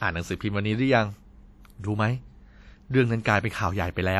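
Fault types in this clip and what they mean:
WMA compression: The speech carries a plainly audible ringing, washy coating, with a hiss that swells and fades along with the voice rather than sitting steady underneath it. The top end still reaches about 20.1 kHz, so nothing is dulled by a low cut-off. This is likely lossy transform coding, with damage that fits a bitrate of about 48 kbps. Quantisation noise is smeared across long blocks of tens of milliseconds, and the weakest spectral lines are discarded.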